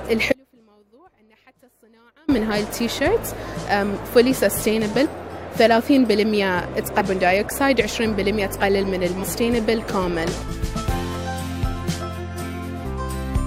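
Audio dropout to a faint residue, 0.32 to 2.28 s: for about 1.96 s the sound drops abruptly to a faint trace roughly 35 dB below its normal level, then returns just as suddenly. The likely cause is the wanted signal being lost while the path after the break stayed live.

Damaged data in a compressed stream, at 5.04 to 5.06 s, 6.99 to 7.01 s, 9.22 s, 10.47 s and 12.84 s: each event is a brief disruption of 14 to 23 ms, heard as a chirp, squawk, click or short hole. Corrupted frames at these points made the decoder misread or reject them and lose sync until it found the next frame header.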